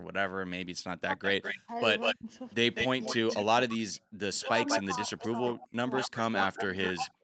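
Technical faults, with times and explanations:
0.00–0.79 s and 4.10–4.15 s, background gated by the echo canceller: The room sound drops out briefly, by up to about 40 dB early on and about 24 dB later. The canceller clamped the microphone while the loudspeaker played, for roughly 200 ms and then 50 ms.
1.07–7.23 s, speech suppressed in double talk: The talker's level dips, falling by around 35 dB at its deepest. Both sides are likely talking at once, so the canceller cannot tell the talker from the echo and turns everything down.
1.23–3.44 s and 4.35–7.09 s, echo leak: A copy of the sound returns 200 ms late, about as loud as the direct sound at first and about 5 dB quieter later. The far end's canceller likely failed to remove what its loudspeaker fed into its microphone.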